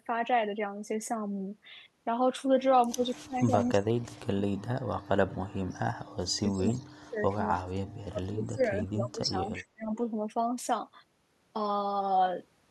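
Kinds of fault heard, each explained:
Speech suppressed in double talk: the speech sinks by some 30 to 40 dB in stretches, likely an echo canceller ducking both overlapping talkers.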